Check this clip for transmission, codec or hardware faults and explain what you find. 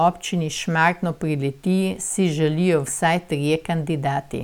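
Nothing turns up here: the speech comes through without any transmission, codec or hardware trouble to report.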